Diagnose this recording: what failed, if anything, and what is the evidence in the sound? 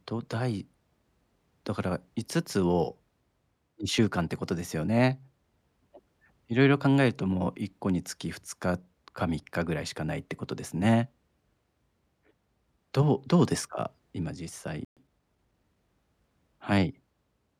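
At the playback stage the player likely ran short of buffered data, or its output thread was held up, leaving the output with nothing to send. The result is a playback stall: the speech cuts out in mid-flow at 14.85 s and the line goes silent for 120 ms, until 14.97 s.

Once output resumes, the player works off the backlog that built up during the gap by dropping short slices of audio and cross-fading across the joins. That time-compressed catch-up runs from 14.97 s to 15.77 s at 1.15 times normal speed. The speech sounds rushed but keeps its normal pitch until the player is back in step.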